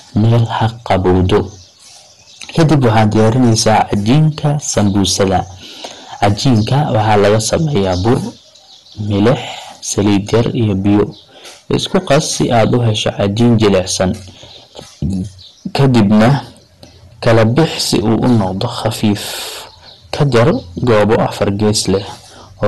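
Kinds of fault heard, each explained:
Hard clipping: the speech was pushed about 18 dB past what the chain could carry, so roughly a tenth of all samples are sliced flat. It is heard as a harsh fuzz on every loud syllable. A waveform shows squared-off plateaus, and a spectrogram shows smeared high harmonics above each peak.
MP2 compression: the audio has a dull, gurgling, granular texture, likely from MPEG Layer II coding at a low rate that fits about 64 kbps. Nothing sounds above 12.2 kHz. On a spectrogram the top is cut sharply, and upper sub-bands flicker on and off in blocky patches.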